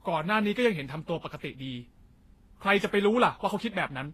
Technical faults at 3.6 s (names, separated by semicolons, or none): transcoding between lossy codecs